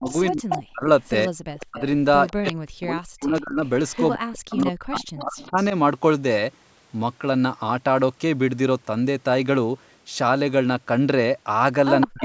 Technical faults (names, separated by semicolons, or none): speech suppressed in double talk; echo leak